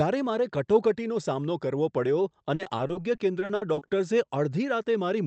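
From 2.55 to 3.91 s the speech turns choppy and robotic, the mark of repeated packet loss. About twelve short holes, none longer than 60 ms, are each patched by stretching the last sound, so roughly a quarter of that span is filler. Unlike a single dropout, it is a rapid string of gaps. The call path's Opus coding, whose 8 kHz upper limit fits a modest bitrate, persists under it.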